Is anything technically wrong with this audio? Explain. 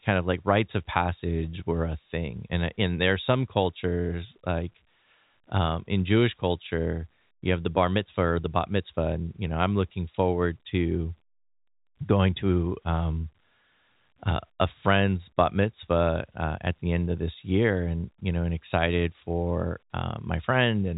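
No, nothing stood out as technically wrong when listening to this speech.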